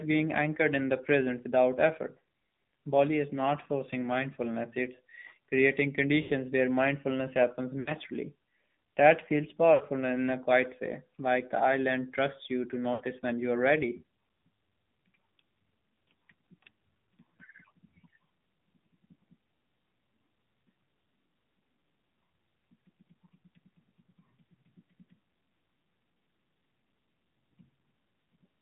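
Throughout, the AMR narrowband mobile codec limits the speech to about 150 Hz to 3.6 kHz, with plainly buzzy, synthetic coding that fits a low mode near 7.4 kbps.

Lost AMR speech frames occur at 2.24, 6.22 (after "forcing mindfulness it's creating"), 7.80 (after "where mindfulness happens"), 9.74 (before "in a quiet way") and 12.94 s. Each runs about 40 to 100 ms, and the decoder stretches the last sound into a fading warble.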